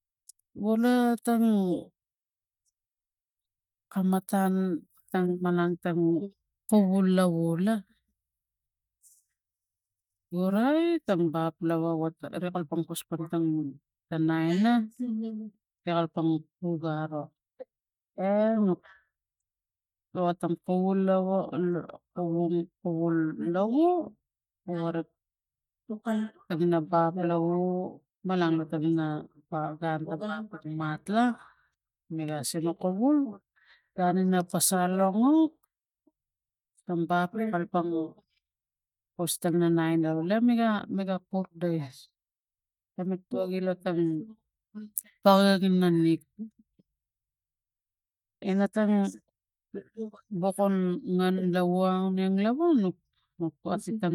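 No technical faults can be heard anywhere in the speech. Nothing in the recording calls for a timestamp or a closer look.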